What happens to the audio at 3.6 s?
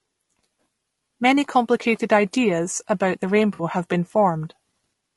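From 3.53 to 3.63 s there is AAC frame loss with concealment. About 60 ms of coded audio went missing. The decoder rebuilt the gap from the last good spectrum, so the speech there turns briefly smeared and noisy, with a phasey blur.

This sits on top of a rough, grainy coding texture heard across the whole clip. Noise fills the spaces between the voice's harmonics. The top band sounds thin and synthetic. The likely cause is low-delay AAC compression at a low bitrate, around 32 kbps.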